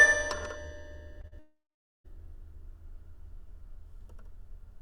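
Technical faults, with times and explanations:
1.21–1.25 s and 1.27–1.33 s, short concealed packet loss: about 20 ms and then 40 ms of data missed the decoder's deadline, so the receiver extended the preceding sound to fill each gap before blending back. Each one comes across as a brief smear or wobble.
1.39–2.06 s, long network dropout: a stretch of about 0.66 s of audio was likely lost in transit. The receiver first continued the last sound as a decaying buzz or hiss, which thins into about 0.44 s of silence before audio resumes with that portion gone.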